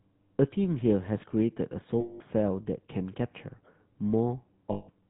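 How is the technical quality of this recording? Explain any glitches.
The speech carries plainly audible coding damage throughout, plus two short dropouts.

Throughout, the GSM full-rate codec is the limiting factor, which fits 13 kbps full-rate coding. The codec models the vocal tract and drives that filter with a sparse, regularly spaced pulse excitation that keeps only every third sample, so the detail between pulses is lost. The voice sounds buzzy and gravelly. On a spectrogram the energy stops sharply at 4 kHz, and the harmonics look coarse and smeared rather than cleanly striped.

From 2.0 to 2.21 s (200 ms) and from 4.72 to 4.89 s (160 ms), lost GSM frames interrupt the speech. The decoder fills each gap by repeating the parameters of the last good frame. What you hear is a held, rough, metallic ring where the speech should continue. On a spectrogram this appears as a frozen, smeared band of energy. 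In the waveform the envelope stops following the speech.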